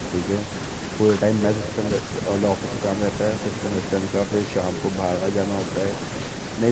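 Speech carrying an echo with no canceller throughout: about 15 dB down and roughly 0.4 s late, each phrase returns as a thinner distinct copy rather than blending into reverb.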